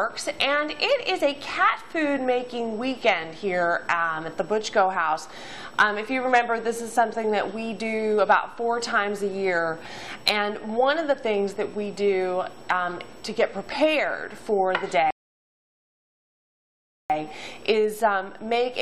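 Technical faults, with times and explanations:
15.1 to 17.1 s, rebuffering stall: the audio just drops out to dead silence for about two seconds, then picks up again at exactly the point where it stopped. Nothing gets skipped, so the sound on either side joins up cleanly; it's simply pushed later, adding 1.99 s to the playback. That's the player draining its download buffer, sitting idle until fresh data shows up, and then carrying on from where it paused.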